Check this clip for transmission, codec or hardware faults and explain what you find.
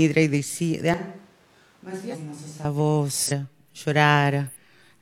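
Two kinds of fault are present in this speech clip.

From 0.94 to 2.65 s the sound turns hollow and roomy, roughly 10 dB quieter with background noise rising; likely a switch to a distant microphone after the close one dropped out.

At 2.09 to 2.16 s, 3.25 to 3.31 s and 4.46 to 4.54 s, damaged data in a compressed stream makes the decoder lose frame sync and search for the next frame header, producing brief glitches.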